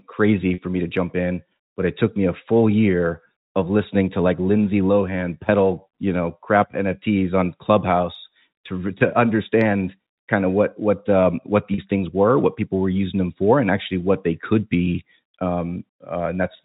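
At 0.54 s, just before "me to jump in", the speech briefly hangs on a slightly buzzy, held tone for about 40 ms. The same thing happens at 11.74 s, between "what what um what" and "things were what people". Both are packet loss with pitch repetition. A gap that fits two lost packets was bridged by repeating the last pitch period, and the gap was too short for that to fade into silence. Beneath it, the band-limited G.711 telephone coding carries through as expected.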